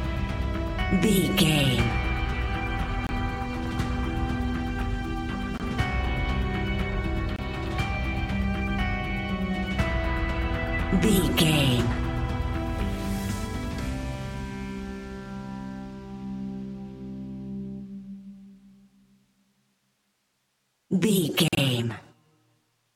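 Corrupt frame muted at 3.07 to 3.11 s, 5.58 to 5.61 s, 7.36 to 7.40 s and 21.48 to 21.58 s: the decoder rejected damaged frames and silence was inserted in their place. The holes cut in abruptly, with lengths that fit two, one, one and four frames of about 20 to 36 ms each. Unlike a skip or dropout, timing is preserved, and the holes are true silence rather than concealed fill.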